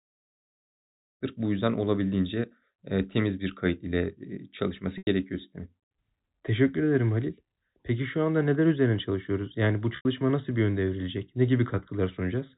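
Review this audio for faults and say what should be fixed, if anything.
Packet loss with pitch repetition at 4.98 s and 9.96 s: 90 ms dropped each time, and the receiver looped the last pitch period, giving a brief buzz that fades before the speech cross-fades back.

Adding forward error correction or redundant packets on the network path would recover these gaps instead of concealing them.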